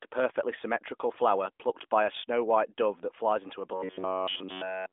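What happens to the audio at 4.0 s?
From 3.92 to 4.03 s, just after "that flies into a", AMR bit errors strike: over roughly five 20 ms frames, some percent of the weakly protected bits flip, misplacing excitation pulses and skewing gain and spectral values. The sound turns hoarse and gargly, with a spectrogram showing smeared, noisy energy within the narrowband limit and a waveform that looks ragged but keeps its level.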